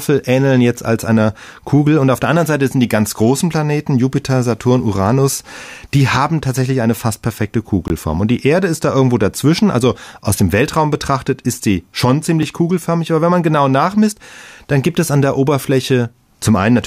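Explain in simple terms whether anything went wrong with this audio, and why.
The speech drops out twice in a block of digital silence: a 20 ms hole from 7.88 to 7.90 s and a 3 ms tick at 12.43 s. The audio is replaced by silence with no fade, so the sound cuts out and back abruptly.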